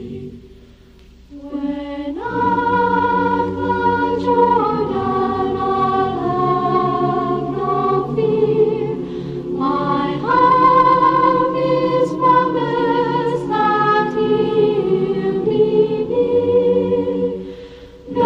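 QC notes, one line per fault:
No faults found in this clip. Nothing in it needs flagging.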